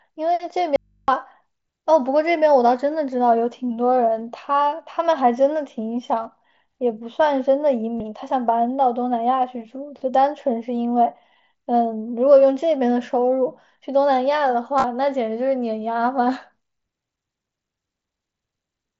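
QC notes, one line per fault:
0.76–1.08 s, audio dropout to a faint residue: the sound cuts out abruptly for about 320 ms, and the gap holds only mains hum at roughly 40 dB below the signal before the signal snaps back. The likely cause is a break in the signal feed while the input stage stayed live. Unlike a natural pause or fade, the edges are instant and the gap is filled with hum rather than room tone.
6.23–6.25 s, 7.97–8.00 s and 14.78–14.84 s, concealed Bluetooth headset packet loss: short gaps of about 22.5 ms, 30 ms and 37.5 ms. Their lengths fit three, four and five lost 7.5 ms frames. The last one is scattered over about 60 ms, with no run longer than 15 ms. The receiver patches each gap by repeating a closely matching stretch of the preceding waveform at full level, so the first two come through as buzzy held tones with a small warble where real audio returns, rather than holes. 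That filled-in continuity is what separates them from the dropout. Behind both, the mSBC wideband link can be heard passing the sound up to 8 kHz.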